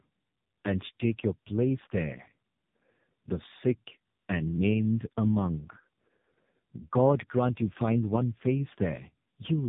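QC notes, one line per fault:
throughout: tandem speech coding. Speech is rough, muffled and warbly, with nothing above 3.8 kHz. The layered, compounded smearing points to two low-rate narrowband speech coders in a row, the second re-encoding the first's artefacts, rather than a single coder's milder roughness.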